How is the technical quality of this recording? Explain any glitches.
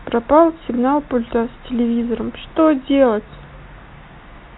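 Nothing here stands out as a glitch: the speech comes through with the narrow, boxy character of ordinary G.711 telephone coding, and nothing else interrupts or disturbs it.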